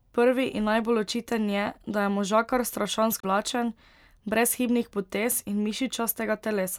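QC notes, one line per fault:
3.20–3.24 s, damaged data in a compressed stream: a brief glitch of about 40 ms breaks into the speech. Corrupted bytes in the encoded stream made the decoder misread or refuse those frames, lose sync and hunt for the next valid frame header. On a spectrogram it shows as a short disruption of the surrounding harmonics; the waveform shows a short discontinuity.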